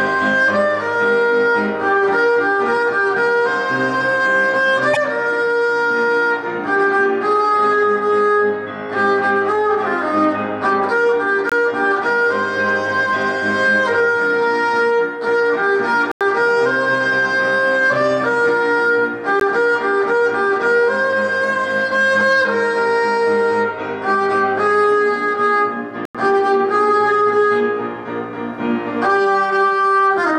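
At 4.93 s, the sound skips forward and the audio is garbled until 4.97 s. This is a broken MP3 bit reservoir, likely from frames cut out of the stream. Each MP3 frame can store part of its data in earlier frames. After a cut, the next frame reads back into bytes from the wrong frame. The decoded result is nonsense for about 44 ms, close to two 26 ms frames.

Next come four blocks of digital silence. The first runs from 11.49 to 11.52 s and lasts about 23 ms, which fits a 1024-sample buffer. The second runs from 16.12 to 16.21 s. A third follows at 19.40 s, about 16 ms long. The last runs from 26.05 to 26.15 s. The two longer holes last about 93 ms each, which fits a 4096-sample buffer. In each case, output samples were zeroed, probably because a buffer was not filled in time. The audio drops to nothing and returns with no fade. The long ones are audible holes.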